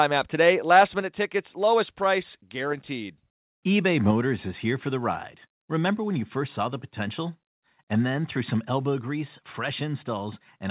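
At 1.02 s, just before "tickets lowest", and again at 4.11 s, before "is here for the", the level drops by about 4 dB, likely a microphone volume stepped down by the call software.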